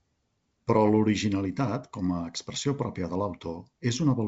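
Speech clip with no technical faults to report.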